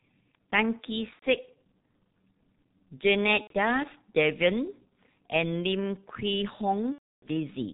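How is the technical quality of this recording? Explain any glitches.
The technical quality is poor, with heavy codec damage throughout and three dropouts.

The whole recording carries G.723.1 codec damage. Its coarse 30 ms frame coding leaves the speech muffled and hoarse with smeared consonants, which fits a bitrate near 6.3 kbit/s. A spectrogram shows energy stopping sharply at 4 kHz, with blocky, blurred formants.

VoIP packet loss concealed by the speech codec occurs at 1.13–1.24 s, 3.41–3.53 s and 6.93–7.28 s. The first two gaps point to about 90 ms of lost audio and the last to about 300 ms. The decoder repeats its last pitch and filter while lowering the gain, so the sound becomes a buzzy tone or coloured noise that fades, and it is muted from the third lost frame onward. On a waveform, the amplitude falls over the first lost frames of each gap and then drops to silence.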